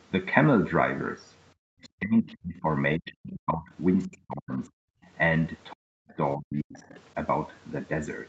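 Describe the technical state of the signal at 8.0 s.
At 8.0 s the speech is intact, with no fault at that moment, only the normal band limit of the call path, which leaves nothing above 8 kHz.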